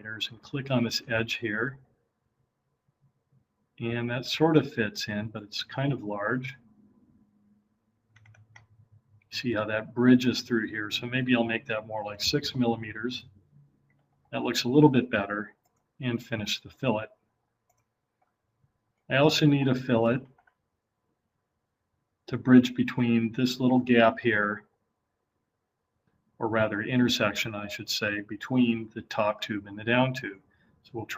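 No technical faults are audible anywhere in this audio.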